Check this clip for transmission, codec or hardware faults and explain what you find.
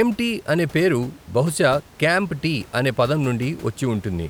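No transmission, codec or hardware faults can be heard in this speech; the signal stays continuous and stable throughout, with only the room's own background noise sitting about 24 dB below the speech.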